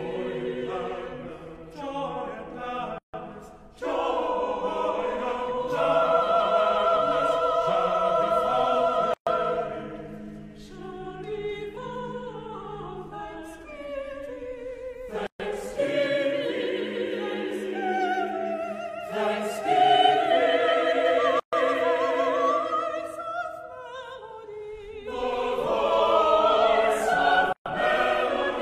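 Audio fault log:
2.98 to 27.66 s: gap at a join of encoded pieces. Silences open at 2.98, 9.14, 15.27, 21.40 and 27.53 s, about every 6 s. The first lasts 155 ms, the rest 130 ms. Each run's encoder delay and end padding stayed in. Edges are smeared by the codec.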